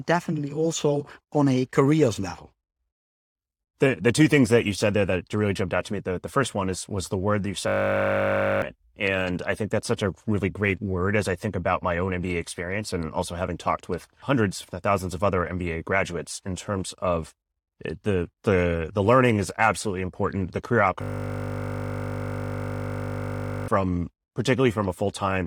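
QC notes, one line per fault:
7.68–8.62 s, system hang loop: after "the word that you", a single 20 ms slice of audio repeats exactly, 47 times, until "and I think that's". The driver stalled while the hardware kept replaying the same small buffer, so a 50 Hz buzz replaces the speech and around a second of audio is lost.
21.02–23.68 s, system hang loop: the same 20 ms repetition, 133 times, gives a longer 50 Hz buzz, with roughly three seconds of audio gone.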